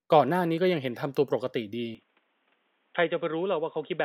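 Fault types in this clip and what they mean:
Input switched to a poorer device: from 1.95 s to the end, the speech turns dull and narrow, with nothing above 3.8 kHz, drops a few decibels in level and gains a faint new background noise, with no gap at the change, most likely a switch to a lower-grade microphone.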